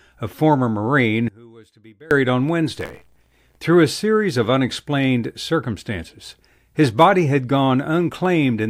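Speech, with two separate faults. From 1.28 to 2.11 s the voice collapses by about 26 dB, leaving only a faint trace rather than silence. That residue is what points to the likely cause, one channel inverted: the centred voice cancels when the two channels are summed to mono and only their small difference survives. A plain level dip or dropout would keep the normal tone or go fully quiet. From 2.79 to 3.59 s comes buffer tearing, a steady robotic buzz at 86.1 Hz, which fits a 512-sample buffer. A small slice of each buffer carries audio from roughly fifty milliseconds earlier, with hard joins on both sides. Unlike dropouts or a stuck loop, there are no gaps or obvious repeats. The rasp rides continuously on the speech and is present only while sound is there.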